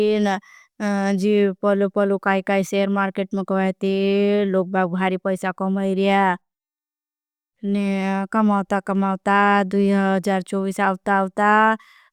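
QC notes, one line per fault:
No faults found on listening to the speech.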